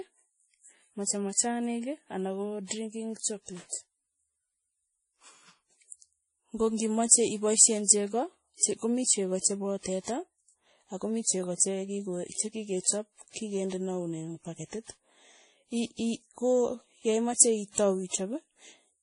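Speech all the way through, with nothing above about 10.5 kHz and two layers of compression smear stacked on top of each other. That mix points to transcoding between lossy codecs, likely a roughly 48 kbit/s WMA pass later re-encoded as 32 kbit/s MP3.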